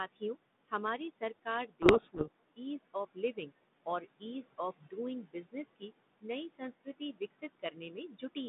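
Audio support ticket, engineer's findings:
Noise suppressor artifacts, whole clip: background dips between phrases and swells under speech. Suppressor cutting bands it classes as steady noise by about 20 dB, frame by frame, so the room noise (about 14 dB under speech) pumps.

Speech cut by the noise suppressor, 0.13–0.73 s, 1.11–3.52 s and 3.86–8.37 s: soft consonants and word tails swallowed, dropping up to about 20 dB. Suppressor misreading low-level speech as noise, roughly a fifth of a second, under a second, then about a second and a half lost in total.

Codec payload misread, 1.82–2.40 s: speech buried in harsh, rasping distortion. Sounds like sender and receiver disagreeing on G.726 packing, likely reversed bit order of the code words, so the decoder unpacks wrong values until both sides use the same format again. Narrow 3.7 kHz telephone band throughout.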